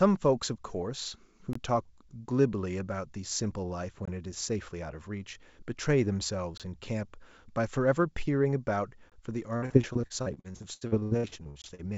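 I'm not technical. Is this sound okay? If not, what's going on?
No, it has two kinds of fault.

The first is a gap between chunks. The sound was handled in pieces about 2.5 seconds long, and a tiny silence sits at each join. Each hole lasts about 21 milliseconds. They fall at 1.53, 4.05, 6.58, 9.10 and 11.62 seconds. Nothing is lost. The sound just stops briefly, then carries on.

The second is repeated packet loss, which makes a robotic sound. From 9.56 to 11.80 seconds, pieces of the sound keep going missing, about two dozen times. The longest hole is 76 milliseconds. Each one is patched by stretching the last bit of sound, so over a third of that stretch is filler. That makes it choppy and robotic. The sound came through a phone-call link, which cuts off everything above 8 kHz.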